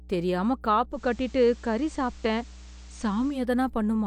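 Mains hum runs from the first moment to the end: a steady 60 Hz tone with low harmonics, roughly 20 dB under the speech. It comes from a ground loop or nearby transformer letting the power line leak into the signal path.

Digital radio blending to analogue happens at 0.90 s, when the receiver loses the digital stream and cross-fades over 164 ms to the FM broadcast. Hiss rises to roughly 30 dB below the speech, and the level shifts about 1 dB until the return at 3.43 s.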